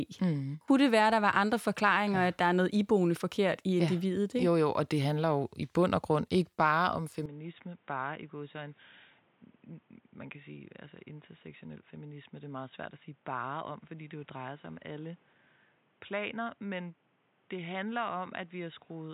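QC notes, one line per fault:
7.26 s to end: input likely switched to a poorer device. Right after "grund ikke bare om" the speech turns boxy and narrow, with nothing above 3.8 kHz, drops about 10 dB in level, and carries a new noise floor only about 30 dB below the speech. There is no gap at the switch. A simple low-pass filter would leave level and noise untouched, but here band, level and background all change together at one instant, which marks a change of device.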